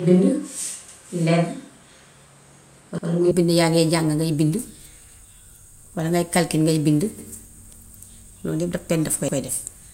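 From the start until 3.31 s the speech has the sound of a switch to a distant microphone, likely from a close microphone dropping out: roomy, hollow and thin in the bass, with room noise roughly 35 dB below the speech. The level barely changes, so it is the abrupt return of close, full tone at 3.31 s, not a level jump, that shows a microphone change rather than added reverb. At 0.88, 2.98, 5.08, 7.18 and 9.28 s (the last just after "pen daf koy"), overlapping chunks make a 100 ms stretch play twice. These stutters fall every 2.1 s, which fits chunked processing with a 2 s chunk length. Because sound repeats rather than going missing, they are distinct from dropouts.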